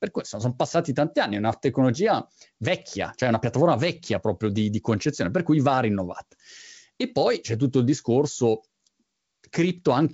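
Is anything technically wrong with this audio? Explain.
No, nothing's wrong here: it's ordinary G.722 wideband telephone coding at 64 kbit/s, so the speech simply has nothing above about 7.8 kHz, which is just what that path does.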